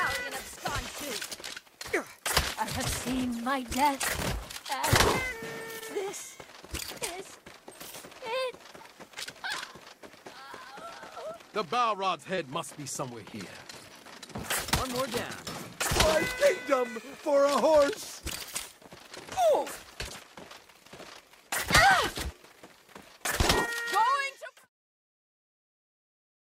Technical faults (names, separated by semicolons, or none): short concealed packet loss